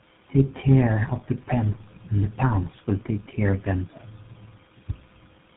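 This is a speech clip with tandem speech coding throughout. The sound passed through three low-rate speech coders in turn, decoded and re-encoded at each hop. Every coder worked on the previous one's damage, so errors stack. The result is rough, muffled and warbly. Nothing is heard above 3.8 kHz. The character fits an AMR-NB leg followed by two GSM full-rate legs, linked by G.711 A-law transcoding.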